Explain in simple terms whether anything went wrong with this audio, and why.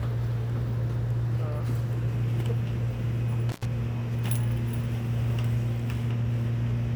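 Something did go wrong, once. Between 3.49 and 3.65 seconds the sound briefly cuts out, which is an intermittent contact: a loose plug or cable lost its connection for about a tenth of a second and then reconnected. You can tell it apart from a digital dropout by the small crackle as the sound leaves and returns, and by the faint hiss left in the gap instead of perfectly clean silence.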